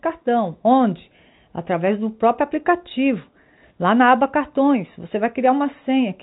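Telephone-band speech with no technical faults to be heard.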